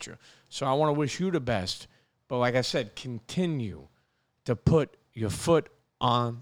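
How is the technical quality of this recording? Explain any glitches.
No glitches or technical faults are audible anywhere in the recording.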